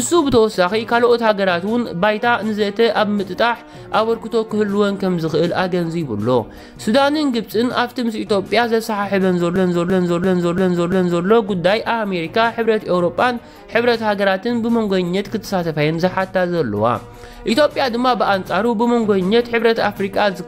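There's a system hang loop from 9.56 to 11.26 s: one 341 ms chunk repeats five times at about 2.9 Hz, a machine-gun stutter that fits a 16384-sample buffer cycling while the system froze.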